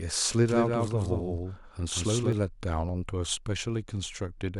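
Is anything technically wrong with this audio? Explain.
Yes. From 0.49 to 2.33 s the speech carries a doubled audio track: a second full-band copy trails by roughly 200 ms at about 5 dB lower, with no reverb tail, and starts and stops abruptly. This is likely a slower second capture path mixed in.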